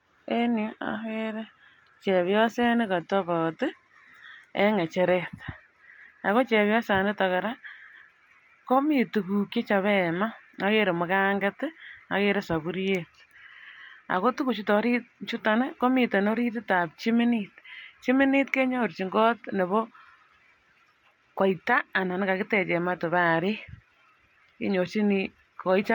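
A recording of speech, with nothing technically wrong to be heard anywhere in it. No faults appear at any point, so there are no times or causes to report.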